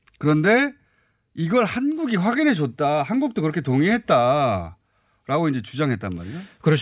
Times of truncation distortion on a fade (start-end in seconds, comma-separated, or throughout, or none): none